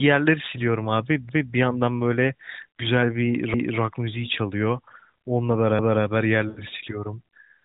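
At 1.29, 3.54 and 5.79 s you get overlapping chunks: each 2 s chunk starts early, so 250 ms replays at the join, heard as a little stutter. Then at 6.49 to 6.64 s, through the narrowband AMR path, lost AMR speech frames leave the sound drawn out and fading toward silence, which fits about four 20 ms frames being concealed.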